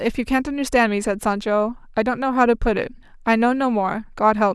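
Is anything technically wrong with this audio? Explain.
No, nothing technically wrong can be heard in this speech clip. Level, timing and continuity all hold steady throughout.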